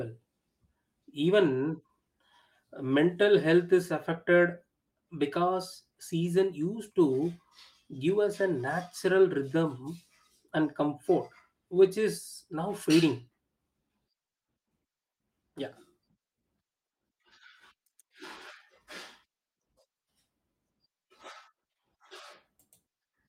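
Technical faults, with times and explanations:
No technical faults are audible anywhere in this speech recording.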